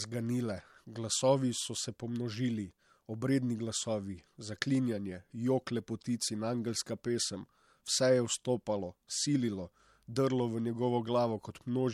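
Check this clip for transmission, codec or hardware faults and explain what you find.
The speech carries one fault from start to finish: low-bitrate audio saved at a high bitrate. Nothing sounds above about 15.8 kHz, and that hard ceiling and the leftover artefacts come from an earlier MP3 pass at a low rate, likely around 64 kbit/s, later re-saved as a large file near 200 kbit/s. The second encode cannot restore the discarded detail, so the file's size and rate do not match how it sounds.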